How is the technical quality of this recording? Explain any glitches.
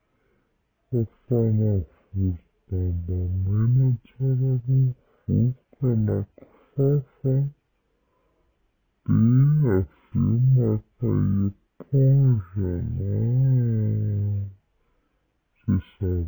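Poor, because one fault runs through the whole recording. Throughout, stereo read as mono makes the speech play at half speed and an octave low, since the interleaved left and right samples are played back as a single channel. On a spectrogram, harmonics sit at half their frequencies and syllables stretch to double length.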